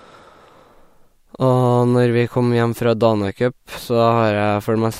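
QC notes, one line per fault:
No fault found.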